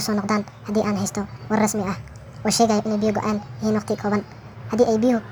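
From start to end, the speech runs fast and high. This is a wrong sample rate fault. Audio recorded at 32 kHz is played at 48 kHz with no conversion. Speed rises by 1.5 times. Pitch climbs about 7 semitones, giving a hurried, chipmunk-like sound.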